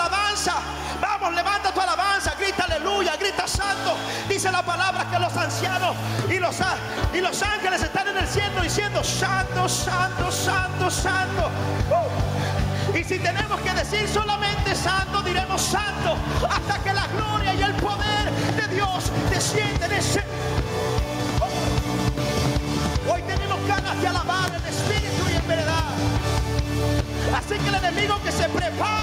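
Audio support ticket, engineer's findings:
Gain pumping, throughout. Input gain likely set far too high for the mic, with a fast limiter or compressor clamping down on each loud sound. Gain swing of around 10 dB. Loud and soft passages pulled close together; overall sound squashed.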